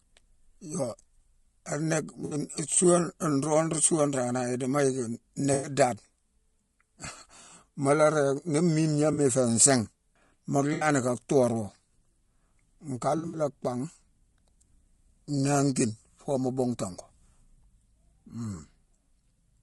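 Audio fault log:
Throughout, low-delay AAC compression: the speech sounds rough and grainy, with noise between the pitch harmonics and a thin, synthetic top band. The likely cause is AAC-ELD's short frames, which resolve harmonics poorly, coded at a low rate near 32 kbps.
2.25 to 13.39 s, AAC frame loss with concealment: there are drops at 2.25 s (60 ms), 5.53 s (100 ms), 9.13 s (40 ms, before "i fé"), 10.73 s (80 ms, before "ka thoorwo") and 13.17 s (spread over 160 ms, longest around 70 ms). The decoder rebuilds each gap from the last good spectrum, leaving smeared, noisy, phasey patches.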